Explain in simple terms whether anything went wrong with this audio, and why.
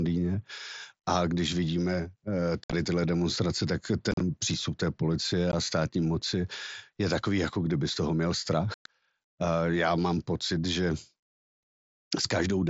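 Speech drops out briefly at 2.64–2.73, 4.11–4.21, 5.52–5.54 and 8.74–8.86 seconds. This is unconcealed Bluetooth headset packet loss. Short voice packets between headset and phone never arrived, and silence filled each gap, leaving holes with abrupt edges in the wideband mSBC audio.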